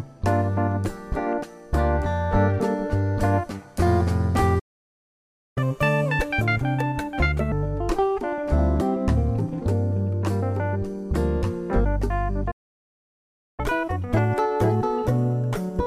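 At 4.59 s the sound drops out for just under a second, back at 5.58 s. That playback stall is likely the player running dry of data or its thread getting blocked. Then comes catch-up at higher speed from 5.58 to 7.52 s: the backlog gets resampled at 1.5 times speed, so everything rushes and jumps up about seven semitones before settling. The same pattern repeats. A second stall silences things from 12.51 to 13.60 s, about 1.07 s, and the catch-up after it runs at 1.25 times speed, roughly four semitones sharp, all the way to the end.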